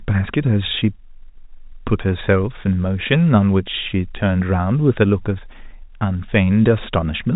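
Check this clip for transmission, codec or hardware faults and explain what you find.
Nothing here sounds like a fault: the speech just has the narrow, phone-line character of ordinary G.711 telephone coding, with nothing above about 3.8 kHz, which is simply how that path sounds.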